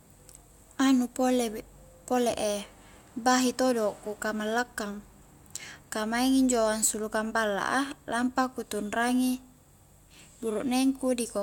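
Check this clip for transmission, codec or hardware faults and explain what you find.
I found no faults in this clip.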